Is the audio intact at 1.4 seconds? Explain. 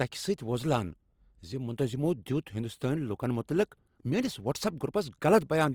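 No. At 1.4 seconds the speech carries Opus compression damage, present throughout the clip rather than at that moment alone. The likely cause is low-rate Opus coding in its CELT music mode, which fits about 24 kbps. With too few bits, the encoder keeps each band's energy but fills detail by folding lower bands or injecting noise, so the sound turns grainy, rough and noisy instead of swirly. Content still reaches about 20.3 kHz, and the damage is plainly audible.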